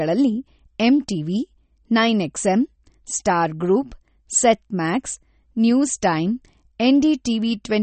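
Across the whole speech clip there is MP3 compression damage, plainly audible and likely from a low bitrate near 32 kbps. Treble is cut flat at 8.4 kHz, giving a hard ceiling on a spectrogram, with flickering holes below it where weak components drop out frame to frame, heard as watery, swirly sibilants and smeared attacks.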